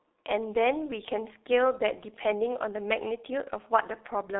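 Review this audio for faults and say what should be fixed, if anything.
The whole recording carries heavy G.723.1 codec damage. This low-rate telephony codec rebuilds speech from a coarse voice model refreshed only once per 30 ms frame, so consonants smear together and vowels take on a hoarse, buzzy edge. On a spectrogram the energy sits in a 300 Hz to 3.7 kHz band with a hard ceiling near 3.9 kHz, and the harmonics look blurred. This fits a bitrate around 6 kbit/s. To prevent it, route calls through a wideband codec at a higher bitrate.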